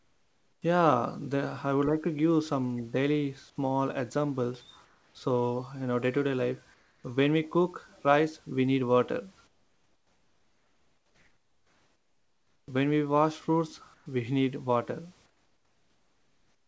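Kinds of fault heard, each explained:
Comfort noise in place of the background: in the pauses between speech, the room's natural background gives way to a smooth, featureless hiss about 5 to 11 dB quieter. The gaps run from 0.12 s to about 3.2 s, the longest from 9.47 to 12.68 s. This is likely discontinuous transmission: the sender stops sending audio when no speech is detected, and the receiver fills the gap with synthetic noise loosely shaped like the background.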